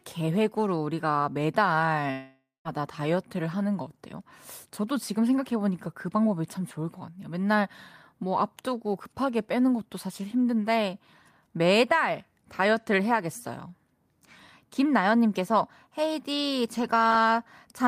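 From 2.11 to 2.68 s the speech turns into a fading buzz, then 0.16 s of silence, and resumes with about half a second missing, likely a long network dropout.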